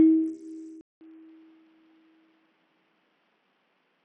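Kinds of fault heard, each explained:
Bluetooth SBC compression: the music is coarsely coded throughout, nothing above 16.2 kHz, with gritty noise and aliasing riding on it, likely from a low bit pool starving the upper sub-bands; a spectrogram shows a hard ceiling with flickering, patchy treble bands beneath it.
Input switched to a poorer device: at 0.81 s the sound drops out for 200 ms, then returns duller, about 5 dB quieter, with a new noise floor roughly 40 dB under it, likely a change to a narrower input; the spectrogram shows content stopping at 3.8 kHz.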